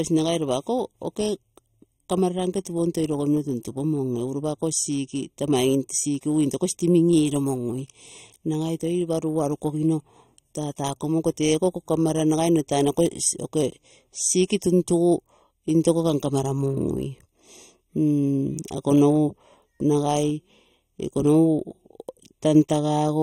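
One channel runs roughly a third of a millisecond behind the other before the two are summed to mono, a channel delay that causes comb filtering across this speech recording. Fixed notches starting around 1.5 kHz and repeating upward make the audio sound hollow and phasey throughout.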